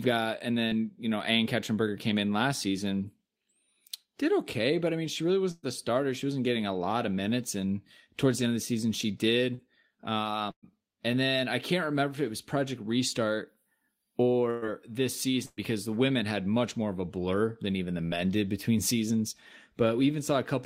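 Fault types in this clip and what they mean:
short concealed packet loss: About 40 ms of speech reached the decoder too late, near 0.67 s and again near 9.55 s. The receiver continued the preceding sound through each hole and blended back, so each is heard as a brief smear or wobble.
burst of packet loss: Consecutive packets went missing, 120 ms at 5.51, 10.51, 14.51 and 15.46 s and 40 ms at 18.06 s. The receiver stretched the last sound into a fading buzz or hiss, nearly silent at 10.51 s, before speech resumed further on.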